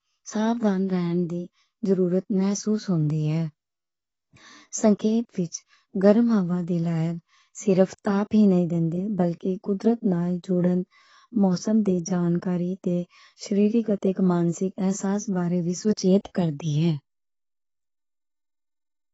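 The speech was likely squeezed through AAC compression at a low bitrate, around what 24 kbps AAC-LC would give, so the encoder discards everything above about 7.9 kHz and starves the remaining bands, leaving the whole clip dull and smeared throughout, with a plainly audible warbling texture on sustained sounds and sibilants.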